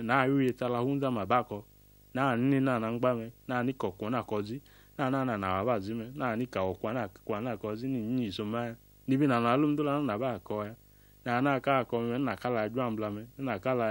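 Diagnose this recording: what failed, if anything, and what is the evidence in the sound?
Video or display buzz got into the analogue wiring: a screen or video cable ran close enough to the audio path to couple its scanning signals into it. Throughout the speech there is a buzz at the 50 Hz field rate with harsh hash above it, plus a whine at 15.6 kHz from the line scan, all sitting roughly 30 dB below the speech. Because the interference is analogue pickup, it stays steady under the speech and through its pauses.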